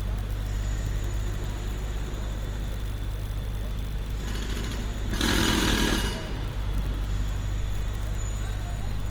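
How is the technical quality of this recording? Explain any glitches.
The quality is limited by plainly audible compression damage across the whole clip.

Opus compression, throughout: the texture is noisy, rough and grainy rather than swirling, and that points likely to Opus in its CELT music mode at a low bitrate, around 24 kbps. Short on bits, the encoder preserves each band's energy but fills the detail by folding lower bands or injecting noise, so tonal parts turn gritty. Bandwidth stays full, reaching about 20.2 kHz.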